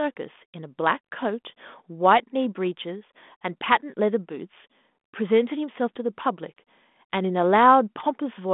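No technical faults are present.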